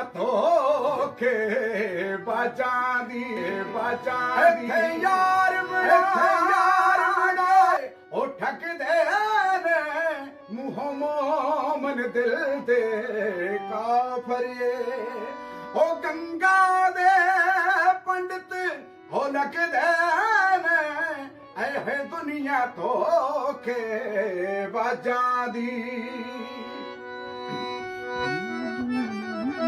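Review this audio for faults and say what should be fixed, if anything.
Doubled audio track, 3.37 to 7.77 s: an equally loud copy trails about 1.5 s behind, likely via a second capture path. The waveform and spectrogram repeat, shifted right, with abrupt edges. To prevent it, route only one capture path into the mix and check edits for duplicated, overlapping regions.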